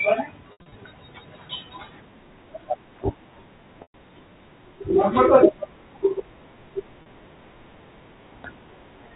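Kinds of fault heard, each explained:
Packet loss with pitch repetition: missing stretches of the stream were bridged by looping the last pitch period. Unlike the clean silence of a plain dropout, the short gap at 7.02 s sounds like a brief, buzzy held tone, while the longer losses at 0.52 s (scattered over 200 ms) and 3.82 s fade into silence before the speech returns with a short cross-fade.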